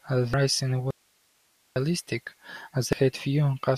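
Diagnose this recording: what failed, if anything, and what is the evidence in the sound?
The codec stage shows damaged data in a compressed stream. Brief faults at 0.34 s and 2.93 s mark frames the decoder could not read cleanly. It lost sync at each point, then resumed at the next valid frame header.

An audio dropout to a faint residue runs from 0.91 s to 1.76 s. The speech stops abruptly for 854 ms, leaving only hiss around 40 dB down. The likely cause is a lost signal upstream while the downstream path stayed live and kept passing its noise floor.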